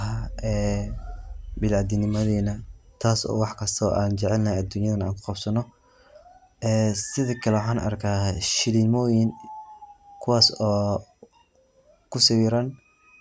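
No dropouts, distortion, noise bursts or timing breaks come up anywhere in this recording of speech, which holds a steady, continuous signal throughout.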